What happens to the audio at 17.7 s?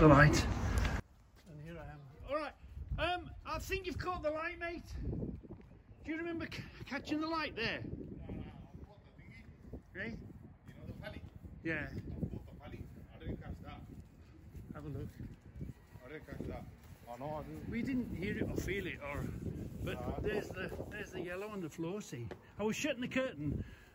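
At 17.7 s the sound sits far below its proper level, about 29 dB down, and has been since 1.00 s, to the end. What remains is faint. The likely cause is one channel inverted, so shared content cancels when summed to mono.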